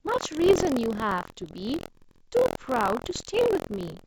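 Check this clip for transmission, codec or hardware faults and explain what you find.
Two faults are present in this speech clip: continuous buffer tearing, and two short bursts of bit errors on an ADPCM link. The G.722 wideband coding carrying it adds at most faint damage.

Buffer tearing runs through the whole clip. A steady robotic buzz sits at 43.1 Hz, which fits a 1024-sample buffer. The writer and reader have slipped. A small slice of each buffer replays audio about a tenth of a second old, joined abruptly on both sides. The buzz appears only while sound is present.

Bit errors on an ADPCM link occur from 0.50 to 0.58 s and from 3.06 to 3.11 s. Flipped bits disturb the decoder's step size and predictor. Each error therefore rings on briefly. The result is pops and rough bursts with momentary level jumps. The second burst is denser.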